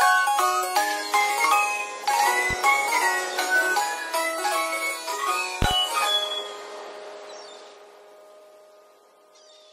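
A loud pop occurs at 2.51 to 2.54 s, one sharp pulse about 10 dB above the sound. At 5.62 to 5.75 s come two pops in quick succession, about 20 dB above it. Likely cause: a voltage step from a plug, switch, static or driver glitch. The sound carries on underneath.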